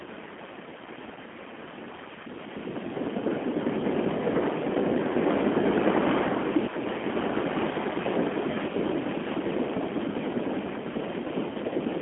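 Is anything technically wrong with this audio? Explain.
Yes. Throughout the speech, G.729 codec damage is plainly audible: rough, slightly synthetic voicing, consistent with an 8 kbit/s G.729A coder. A spectrogram shows a telephone band from 200 Hz to 3.4 kHz, with an empty sheet above 3.6 kHz.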